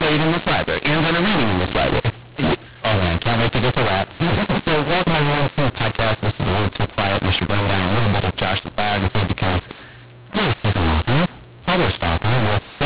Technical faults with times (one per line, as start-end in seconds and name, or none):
0.00-12.86 mu-law and A-law mixed up